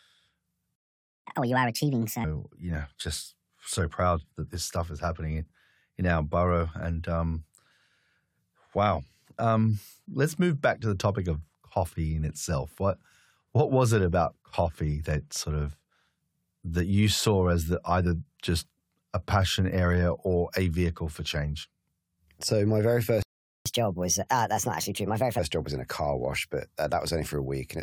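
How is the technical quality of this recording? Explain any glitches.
The recording has two playback stalls, each followed by a stretch of catch-up at higher speed.

Playback stall: The speech cuts out from 0.76 to 1.25 s, a gap of about half a second. It cuts out again from 23.22 to 23.66 s, for about 0.43 s. Both times, the sound stops abruptly in mid-flow and then resumes. The likely cause is a player that ran short of data or had its audio thread blocked, so the output went silent until it recovered.

Catch-up at higher speed: Right after each stall, the player rushes through its backlog by resampling. From 1.25 to 2.24 s it plays at 1.5 times normal speed, and the speech rises by roughly seven semitones. From 23.66 to 25.39 s it runs at 1.25 times speed, about four semitones high. Speed and pitch climb together, so the voice sounds hurried and chipmunk-like. It then drops back to normal once the lost time is regained.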